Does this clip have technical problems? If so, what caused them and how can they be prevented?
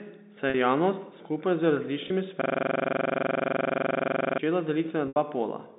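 Yes. Packet loss with pitch repetition occurs at 0.50 s, 2.08 s and 5.08 s. Gaps of 40, 20 and 80 ms were bridged by repeating the last pitch period. The short ones sound held and buzzy. The 80 ms one fades toward silence. Stronger jitter buffering and forward error correction would prevent this.

A system hang loop runs from 2.42 to 4.39 s. One 42.67 ms slice repeats dozens of times, giving a machine-gun stutter at 23.4 Hz. That fits a 2048-sample ring buffer cycling while the driver froze. Fixing the driver or raising its processing priority would prevent it.

The G.711 telephone band of 200 Hz to 3.7 kHz is audible beneath these faults.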